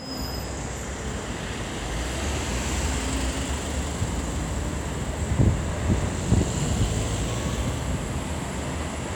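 No technical faults can be heard anywhere in this audio.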